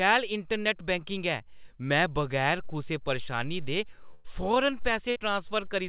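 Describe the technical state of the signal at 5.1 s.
Right at 5.10 to 5.17 s there's a burst of packet loss: the receiver stretches and fades the last sound for about 53 ms, then jumps ahead, skipping roughly 60 ms, all over the call's 4 kHz band-limit.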